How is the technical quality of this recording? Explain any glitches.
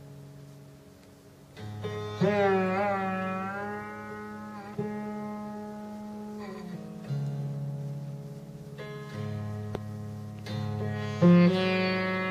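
The technical quality of the recording is sound, with no glitches to explain.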